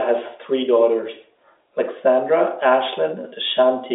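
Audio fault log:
No fault to log in this audio.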